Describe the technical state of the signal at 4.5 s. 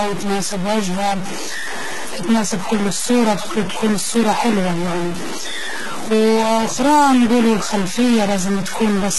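At 4.5 s, as across the whole clip, there's distortion riding on the speech and noise filling the pauses, most likely a stuck bit flipping values by a fixed step. The treble also sounds gritty and lispy, with nothing above 11.8 kHz, pointing to heavy HE-AAC compression at a low bitrate, around 16 kbps, rebuilding the highs from copied lower bands.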